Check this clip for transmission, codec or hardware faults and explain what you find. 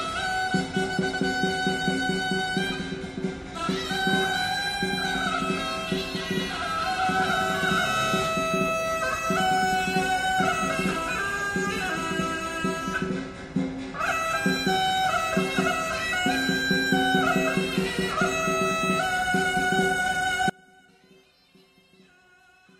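One fault is present: an audio dropout to a faint residue, starting abruptly at about 20.50 s and lasting to the end of the clip. The sound collapses in a single step to a faint leak roughly 30 dB below its normal level, likely because the signal feed broke while the downstream path stayed live. That faint remnant sets it apart from a hard mute into digital silence, and the sudden drop sets it apart from a fade or a natural pause.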